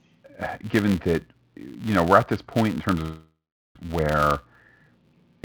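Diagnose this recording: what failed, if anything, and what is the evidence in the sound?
A filter restarted on every block runs through the whole clip, at the buffer stage. A steady 172 Hz buzz rides on the speech and follows its level. The filter loses its state and starts each block from silence. This fits a 256-sample buffer.

A long network dropout occurs from 3.02 to 3.77 s, within the G.722 call audio that has nothing above 8 kHz. The sound smears into a fading buzz, then about 0.41 s of silence. Speech returns with about 0.74 s lost. Packet loss is the likely cause.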